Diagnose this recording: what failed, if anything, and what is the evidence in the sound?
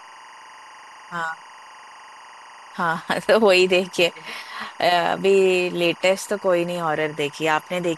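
Timecode bleed in the analogue wiring: linear timecode from an adjacent track or cable has crosstalked into the speech path. Throughout the clip there is a steady chirping warble behind the voice, roughly 25 dB below it, switching between tones near 1 and 2 kHz. Its rhythm fits code running at 23.976 frames per second. The biphase square wave flips pitch according to its bit pattern, and the coupling carries it into the audio.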